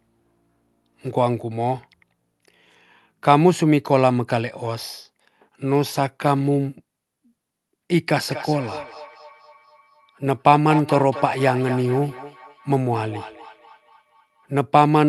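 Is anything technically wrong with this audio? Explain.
Yes. From 8.29 to 14.52 s, each phrase returns roughly every fifth of a second, thin and ringing, peaking at about -13 dB: feedback echo between two devices, where one device's microphone recaptures another's playback.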